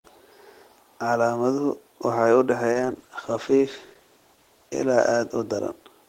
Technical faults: call bitrate drop

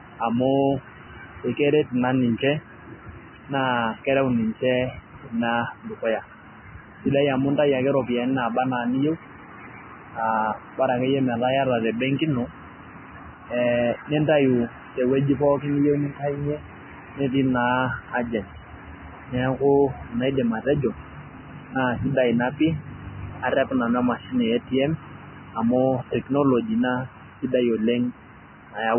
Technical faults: Vorbis compression

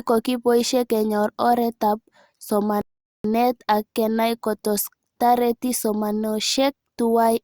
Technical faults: rebuffering stall

